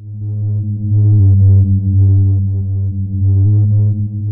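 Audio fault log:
1.20–3.46 s drift correction step: everything drops 6.5% slower and about 116 cents flat, then snaps back, likely a clock-matching resampler stepping its rate.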